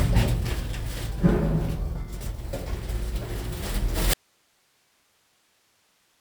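A short recording of sounds with an audio dropout to a faint residue from 4.14 s to the end: the signal cuts abruptly to hiss around 40 dB down, likely a lost source feeding a still-live input.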